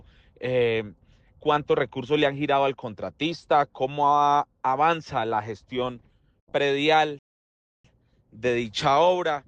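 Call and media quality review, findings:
Rebuffering stall, 7.19 to 7.85 s: playback buffer ran dry, player halted awaiting more downloaded data. Audio drops to silence for roughly 0.66 s, then resumes exactly where it stopped. No content lost; about 656 ms added to the timeline. Likely network delivery shortfall.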